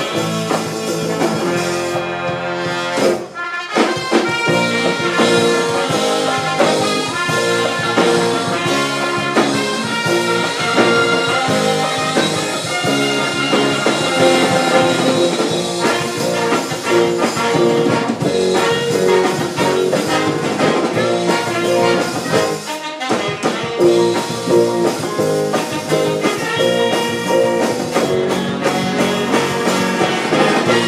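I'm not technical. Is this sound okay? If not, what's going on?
Yes, nothing wrong turns up in this recording; it's fine as it is.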